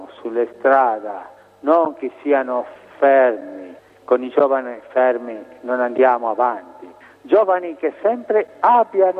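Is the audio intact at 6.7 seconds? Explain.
Yes, the audio is intact at 6.7 seconds, with no dropout, glitch or other fault at that moment.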